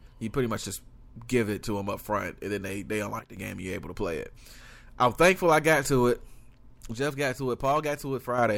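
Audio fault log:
3.19–3.37 s and 6.94–8.38 s, sudden gain jump. After "and then they they", sound and background drop together about 10 dB, later about 6 dB. Likely an unramped gain step.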